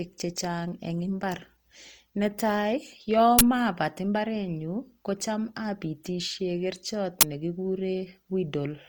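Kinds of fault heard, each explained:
Opus compression: The speech sounds rough and grainy throughout, with noisy texture filling in where fine detail should be. The full bandwidth remains, so nothing turns muffled. This is likely Opus in its music mode, coded at a low rate that fits about 24 kbps.
uninitialised buffer: Twice, a short, loud burst of digital noise cuts in. Playback read a block of memory before any audio was written there. Each burst lasts about 20 ms: at 3.39 s, just before "mapat mbarenyu ko cham", and at 7.21 s, just after "ko cham apitishe kerchot".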